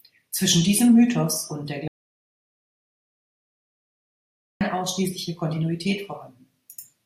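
The input feed was likely lost, with the recorder writing silence in its place: an audio dropout to silence. Right after "und der", at 1.88 s, the speech cuts off into dead silence with no room tone, returning mid-flow at 4.61 s, so about 2.7 s of speech is gone.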